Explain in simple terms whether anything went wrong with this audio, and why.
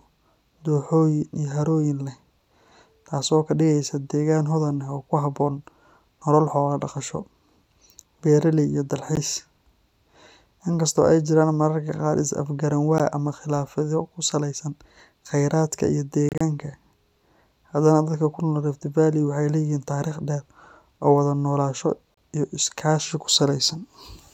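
Short silent gaps cut into the speech at 9.16 s after "beeraley iyo", at 12.98 s, as a cluster between 16.29 and 16.41 s after "ku saleysan kheyraadka iyo", and at 22.14–22.17 s just before "iyo iskaashi ku". This is likely a Bluetooth dropout. Bits of sound reached the headphones too late and were skipped, so the speech jumps ahead.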